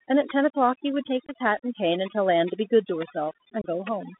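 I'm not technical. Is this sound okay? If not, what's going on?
No. Three problems are audible in this speech.

First, overdone noise removal. A noise-cleaning tool was set far too strong. The background is nearly silent but has little twinkling specks. Quiet parts of the voice were cut away with the noise.

Second, the Bluetooth CVSD headset codec. This is the basic way headsets send voice to a phone. Only sounds between about 200 Hz and 3.7 kHz get through, so the voice is muffled. S sounds are scratchy, loud bright sounds crunch, and a grainy hiss sits underneath.

Third, unconcealed Bluetooth headset packet loss. Twice, small pieces of sound never arrived from the headset: at 1.26 to 1.31 s and at 3.62 to 3.67 s. Each gap is about a fortieth of a second. The voice drops out with a sharp edge that can click, then returns briefly quieter.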